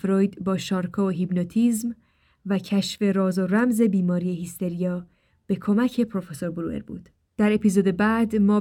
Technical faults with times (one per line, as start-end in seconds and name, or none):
none